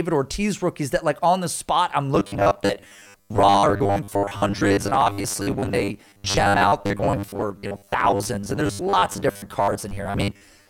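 From 2.15 s to the end, the speech turns into robotic sound from repeated short buffers: a rigid, metallic buzz at a fixed 100 Hz that still loosely tracks the words. The likely cause is audio arriving too seldom, so roughly half the time is filled by looping the last 10 ms while real audio is skipped. Unlike a dropout stutter, there are no gaps.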